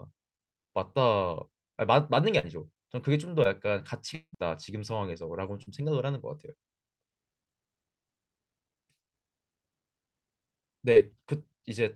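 At 1.61 s the speech shows a short concealed packet loss: about 20 ms of audio failed to arrive in time, and the decoder extended the preceding sound to cover it before crossfading back, leaving a smear. Similar events follow at 2.39 s (about 40 ms lost), 3.43 s (about 20 ms), 5.63 s and 10.92 s (about 40 ms each), each heard as a brief smear or wobble on the speech.

From 4.15 to 4.35 s the speech breaks for roughly 0.2 s. The last sound is drawn out as a buzz or hiss that fades, followed by about 70 ms of near silence before speech resumes with a portion absent. This is likely a long network dropout, with roughly 180 ms of audio never delivered and the gap bridged by concealment and then silence.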